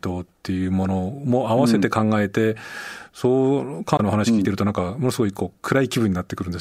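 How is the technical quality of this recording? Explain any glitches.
One glitch stands out in the speech: a short burst of damaged data in a compressed stream, from 3.96 to 4.00 s. Corrupted bytes there make the decoder misread those frames and lose sync until it locks onto the next frame header, which produces a brief glitch. On a spectrogram it appears as a narrow disturbance about 40 ms wide, and the waveform shows an abrupt, jagged break at that point.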